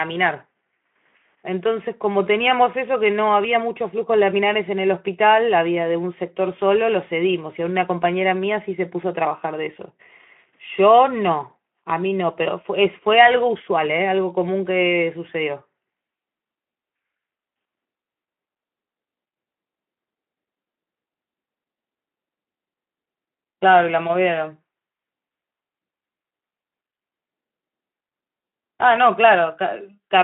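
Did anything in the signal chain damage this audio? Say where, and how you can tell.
No, nothing in the chain damaged this speech. What you hear is a narrowband Speex path working as intended: the sound sits in a telephone band of roughly 200 Hz to 3.4 kHz with nothing above 3.8 kHz, consistent with a stream at around 15 kbps.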